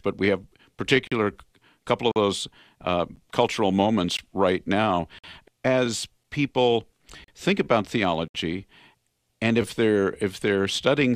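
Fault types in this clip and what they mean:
Gap between stream segments: the time stamps of neighbouring chunks don't quite meet, so the player pads the hole with silence. Here that happens roughly once a second, from 1.07 s to 8.28 s, which suggests one-second segments. The dropouts are hard-edged and run from about 6 ms up to 61 ms. The longest ones include the one between "right now" and "as people think about". Nothing is actually lost; the silence is just extra time.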